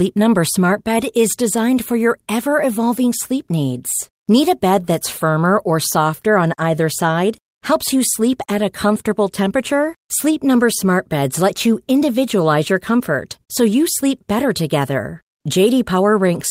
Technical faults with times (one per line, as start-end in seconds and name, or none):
0.00-16.50 clock drift between sender and receiver
0.18-16.29 repeated timing corrections